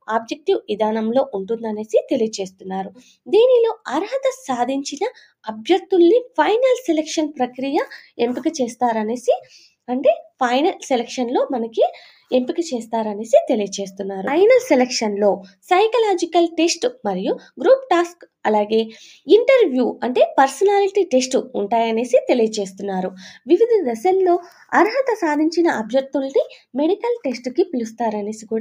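Sound cut by the noise suppressor at 0.3–0.72 s, 2.49–2.66 s and 2.89–3.3 s. Mistaken for noise, the audio sinks about 15–17 dB, showing as dim spectrogram gaps and shrunken waveform stretches.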